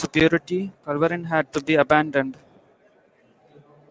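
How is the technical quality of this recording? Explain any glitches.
The recording has one fault, present from start to finish: aliasing. The speech was resampled downward, which fits a drop from 44.1 kHz to 16 kHz, without an anti-aliasing filter. Content above 8 kHz folds back below it, roughly 30 dB under the speech, making sibilants gritty and metallic. A spectrogram shows energy packed hard against the 8 kHz edge, with mirrored streaks that don't follow the speech harmonics.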